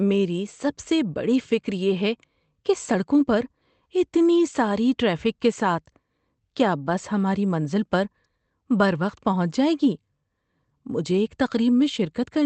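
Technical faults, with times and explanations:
Nothing's gone wrong technically here: it's just speech coming through an ordinary call link, with the top end stopping around 8 kHz as you'd expect from that kind of connection.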